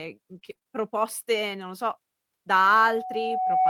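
Between 0.31 and 0.67 s the speech turns choppy and robotic, with several short holes, the longest about 20 ms. This is repeated packet loss: the missing stretches were patched by extending the preceding sound, covering roughly a fifth of that span.

From 2.63 s to the end a steady 747 Hz tone swells over about a second until it sits a few decibels above the speech. That is loudspeaker feedback squeal: the microphone picks up its own loudspeaker, and at that frequency the loop keeps amplifying itself.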